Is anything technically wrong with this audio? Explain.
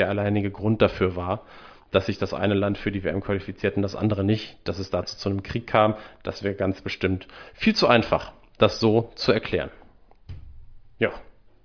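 No, there's nothing technically wrong with this speech recording that I can hear.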